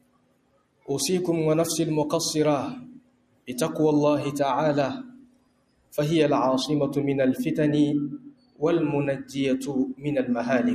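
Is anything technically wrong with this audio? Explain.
Yes. A noise suppressor applied to music or sounds runs through the whole clip. A speech-tuned suppressor treats steady tone and ambience as noise and pulls it down, with a gain swing of roughly 20 dB. Sustained passages pump and thin. On a waveform the envelope breathes in and out rather than holding steady.

Sound cut by the noise suppressor is clearest at 0.00–0.89 s, 2.84–3.49 s, 5.03–5.95 s, 8.17–8.63 s, 9.16–9.38 s and 9.58–10.07 s. Held material sinks by about 20 dB, or about 16 dB at 9.16 s, while onsets pass. A spectrogram shows these stretches fading to darker gaps between bright attacks.

De-emphasis applied wrongly affects 6.22 s to the end. A treble-cut curve meant to reverse pre-emphasis landed on audio that had none, or was applied twice, tilting the response down to about 8 dB lower at 10 kHz than at 1 kHz. The sound turns dull and muffled, and the spectrogram's upper band darkens progressively toward the top.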